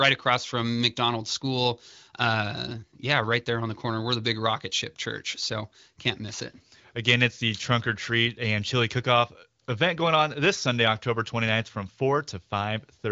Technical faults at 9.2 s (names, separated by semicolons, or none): none